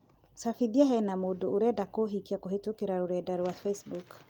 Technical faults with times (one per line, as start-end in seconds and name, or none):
none